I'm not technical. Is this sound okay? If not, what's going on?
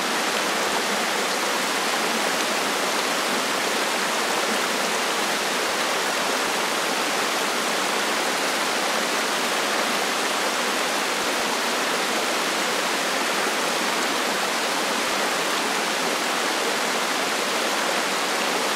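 No. There are chunks out of order at 11.24 to 11.4 s and 15.04 to 15.12 s. A 40 ms slice of sound arrived late and played three slices too late, then one slice too late. Nothing is missing, but the order scrambles briefly.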